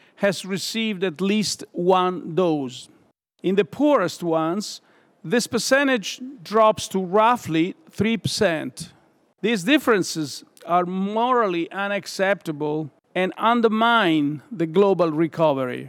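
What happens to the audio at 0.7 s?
Nothing goes wrong at 0.7 s; the speech carries on intact there, with no dropout, click, distortion or other audible fault.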